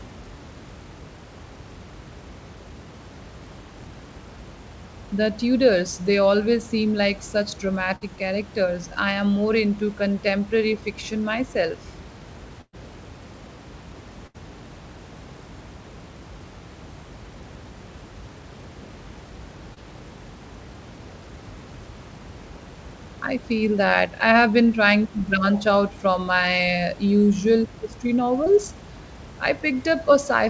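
Bursts of packet loss hit at 7.96 to 8.17 s, between "always seem like such" and "characters I am", at 12.61 to 12.75 s after "into contemporary fiction myself", and at 14.27 to 14.36 s. Several packets in a row never arrived, so the receiver stretched the last sound into a fading buzz or hiss, going fully silent for about 50 ms in the second case, before jumping ahead with roughly 40 to 120 ms of speech gone. On a spectrogram each shows as a smeared, decaying patch followed by an abrupt restart.

Short concealed packet loss follows at 19.74 to 19.78 s and at 28.44 to 28.48 s, after "from my usual history". About 20 ms failed to arrive and was synthesised from the preceding sound. It is heard as a brief smear or wobble, and appears on the waveform as a tiny, slightly blurred seam.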